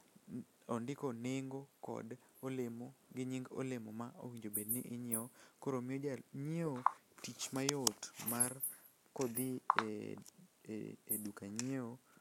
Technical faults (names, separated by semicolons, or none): resampler restarted on every block